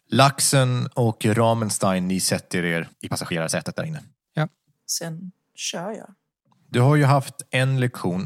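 From 2.74 s to 4.94 s the speech abruptly runs at about 1.6 times its normal pace with unchanged pitch, a time-stretched section. The sound turns rushed, likely from software compressing this span by discarding short fragments to preserve pitch.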